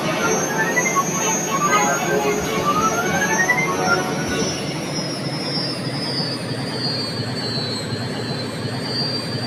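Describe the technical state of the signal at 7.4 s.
Noise suppressor applied to music or sounds, active at 7.4 s and across the whole clip: a speech-tuned suppressor treats sustained tones, ambience and reverb as noise, pulling them down by around 5 dB while attacks pass, so the held sound pumps and thins.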